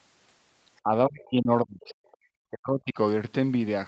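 From 0.83 to 0.91 s the speech dips briefly by about 15 dB. A much deeper hole follows from 1.08 to 1.98 s: the level falls by up to about 35 dB, with roughly 0.7 s of the stretch chopped or muted in pieces. From 2.5 to 2.98 s it drops again, by up to about 40 dB, for roughly half a second. This pattern is likely speech suppressed in double talk. With both ends talking at once, the echo canceller cannot separate the near talker from loudspeaker echo, so it attenuates everything, including the wanted speech.

Between 2.07 and 2.17 s a faint second voice surfaces, very low at around 35 dB below the speech. It is most likely the other side's voice leaking through: far-end audio played on the device's loudspeaker that the echo canceller failed to fully subtract from the microphone signal. Throughout, the call path's band limit keeps all content below 8 kHz.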